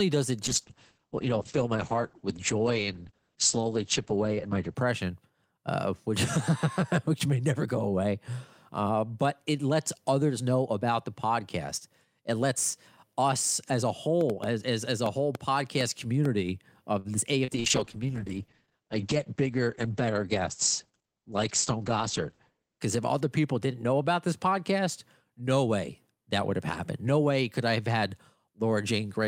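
From 0.45 to 4.85 s a call bitrate drop pulls the speech from 64 kbps down to 9 kbps, where it stays for about 4.3 s. Told to spend far fewer bits, the Opus encoder quantises coarsely and narrows the coded band from 20 kHz to 8 kHz, so the voice turns muffled and watery. On a spectrogram everything above 8 kHz disappears abruptly, and the remaining bands look blotchy and smeared.

Between 14.21 and 16.26 s comes a train of clicks: about seven sharp ticks at an irregular pace of roughly 2.9 per second, peaking about 10 dB above the speech and audible in the gaps as well. The likely cause is interference from nearby equipment or a faulty connection or power supply. The waveform shows isolated, near-identical spikes, and the spectrogram shows thin vertical lines running across the full height.

From 16.99 to 17.08 s a short stall from a late packet holds the current sound for 52 ms while the jitter buffer sits empty. 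Nothing is lost, and playback resumes from the same point, now running 52 ms later. On a spectrogram the harmonics run flat and unchanging for that stretch, and the waveform repeats one cycle shape.

Short concealed packet loss follows at 17.45 to 17.51 s and again at 17.60 to 17.67 s. Each time about 40 ms of audio never arrived, and the decoder papered over the hole with 32 ms and then 42 ms of extrapolated signal before cross-fading back. Each gap sounds like a brief smear or wobble. In the spectrogram the harmonics are copied forward, slightly blurred and fading, and the waveform loses detail there.

A second call bitrate drop runs from 17.55 to 22.90 s, spanning the second concealment. The rate falls from 64 kbps to 10 kbps, with about 5.3 s at the bottom, and the band again shrinks from 20 kHz to 8 kHz. The muffled, coarse quality returns, and the spectrogram again shows a hard ceiling at 8 kHz over patchy, low-detail bands.

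Inside that stretch, from 19.06 to 19.50 s, a jitter buffer speed-up trims roughly 40 ms of backlog by cutting out short pitch-period slices. The speech plays about 8 percent fast with unchanged pitch and sounds hurried. The waveform shows periods removed at the splices, and the spectrogram's syllable patterns appear slightly compressed in time while the harmonic spacing stays the same.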